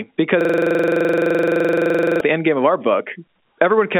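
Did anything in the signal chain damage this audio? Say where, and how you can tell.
Yes. A system hang loop runs from 0.41 to 2.21 s at the driver and buffer stage: a 42.67 ms slice of speech repeats about 42 times, giving a rapid 23.4 Hz stutter. The looping fits a 2048-sample ring buffer replayed while the system froze. The G.711 telephone band stays intact throughout.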